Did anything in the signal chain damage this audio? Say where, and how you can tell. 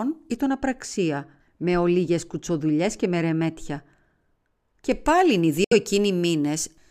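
Yes. A de-emphasis filter was applied wrongly in the playback or decoding stage from 0.37 to 4.9 s. The speech turns dull and muffled, about 13 dB down at 10 kHz relative to 1 kHz. On a spectrogram the upper bands darken steadily toward the top.

From 5.64 to 5.73 s the speech drops to silence, then resumes further along as though it had kept playing. The waveform shows a flat gap, and the spectrogram shows a blank vertical strip. The likely cause is a Bluetooth dropout on the wireless link, and the gap fits roughly three lost frames.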